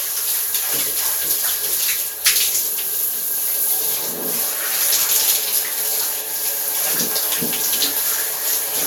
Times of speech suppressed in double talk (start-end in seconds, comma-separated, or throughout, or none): none